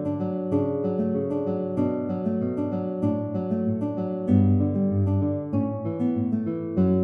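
No technical faults can be heard anywhere in the clip.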